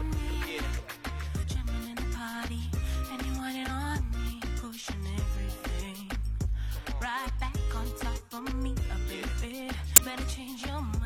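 Glitches at 1.39–1.45 s, 7.23–7.28 s and 9.96–10.01 s reveal damaged data in a compressed stream. The decoder misreads corrupt frames and resyncs at the next frame header.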